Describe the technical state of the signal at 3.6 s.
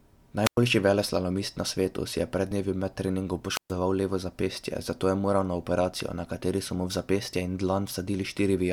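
At 3.6 s the signal is inside a wireless microphone squelch dropout spanning 3.51 to 3.73 s, after "med treningom". The radio link fades, hiss rises, then the receiver's squelch mutes the output for about 128 ms before speech returns at "levo zapestje zato je".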